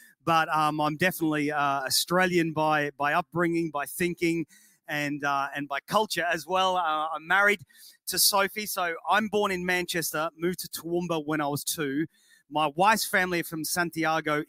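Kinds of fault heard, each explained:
Noise suppressor applied to music or sounds: A suppressor built for speech is running the whole time, so it treats anything steady, along with the room and the tails, as noise and pulls it down. You can hear the level swing by something like 10 dB as it opens and clamps. Sharp onsets get through fine, but sustained parts and decays keep sinking, which gives the clip a pumping, fluttery, thinned-out feel.
Sound cut by the noise suppressor: There are four spots where the suppressor mistakes real sound for noise and ducks it far harder than the rest. These are at 0.0 to 0.28 s (about 21 dB down), 4.45 to 4.89 s (about 18 dB), 7.58 to 8.08 s (about 18 dB) and 12.1 to 12.55 s (about 20 dB). Each dip lasts a few hundred milliseconds, and what's held or fading there just drops away.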